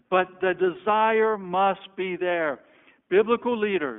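Throughout, the speech passes through an iLBC codec, which fits its 15.2 kbps mode: independent 20 ms frames within a 250 Hz to 3.4 kHz band leave it muffled, rough and plainly synthetic.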